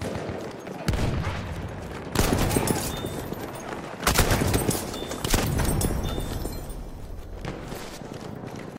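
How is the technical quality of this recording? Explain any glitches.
The recording has two brief glitches from chunks out of order, at 2.3–2.5 s and 7.0–7.2 s. Each is a jumbled moment: a 100 ms chunk plays one chunk late, after the one meant to follow it, leaving three hard joins without losing any sound.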